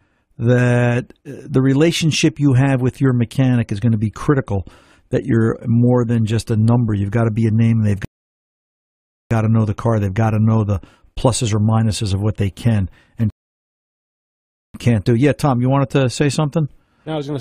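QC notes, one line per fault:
8.05–9.31 s and 13.30–14.74 s: rebuffering stall. The speech drops to silence for about 1.26 s, then 1.44 s. The player ran short of downloaded audio and waited for more. Playback resumes exactly where it stopped. Nothing is skipped, but time is added.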